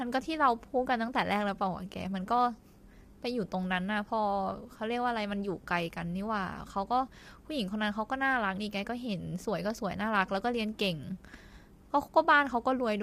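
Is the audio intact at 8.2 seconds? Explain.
No. At 8.2 s, as throughout, the speech sounds rough and grainy, with noise between harmonics. This is likely low-delay AAC compression, whose short frames resolve pitch poorly.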